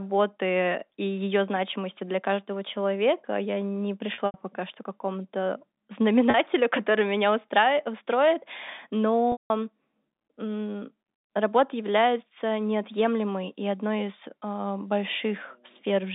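At 4.14 s, packet loss with pitch repetition begins. About 120 ms goes missing across 4.14 to 4.34 s, the longest gap near 80 ms. The receiver fills each hole by looping the last pitch period, so the sound briefly holds and buzzes. At 6.30 s a 40 ms loss gives a short held buzz. At 9.32 to 9.50 s, 180 ms drops out. The repeated period fades to silence before the speech cross-fades back over the narrow G.711 telephone band.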